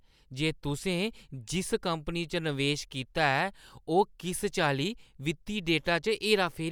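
No technical faults can be heard anywhere in this recording.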